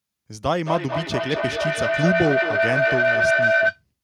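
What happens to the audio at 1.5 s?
At 1.5 s the speech is inside a feedback howl running from 0.63 to 3.83 s: a microphone-to-loudspeaker loop gaining level each pass, ringing near 700 Hz, pulsing roughly every fifth of a second, peaking about 3 dB above the speech.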